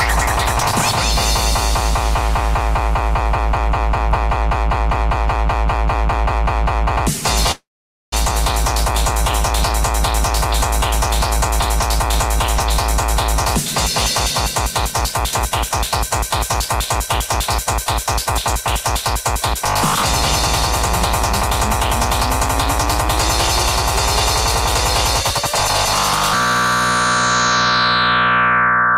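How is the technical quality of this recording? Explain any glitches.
There is one glitch. From 7.51 to 8.16 s, a long network dropout: packets likely stopped arriving, so a fading buzz turns to silence and 0.4 s of audio is lost.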